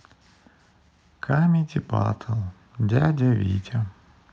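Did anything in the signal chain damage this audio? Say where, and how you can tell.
Yes. The damage is automatic gain rising, in the call processing stage. From 1.3 s to 3.63 s, speech and background swell together by about 4 dB. The AGC judged the input too quiet and slowly raised its gain over those two seconds.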